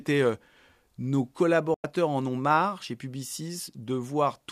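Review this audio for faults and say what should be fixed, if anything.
A digital broadcast dropout cuts the speech from 1.74 to 1.84 s. The receiver stopped getting valid frames and muted, fading out in about 3 ms, then resumed once good data returned. The roughly 100 ms gap, which fits three lost frames, is gone for good. The waveform drops abruptly to flat silence and the spectrogram shows a clean vertical blank across all frequencies. Improving reception margin or adding error correction and interleaving would prevent it.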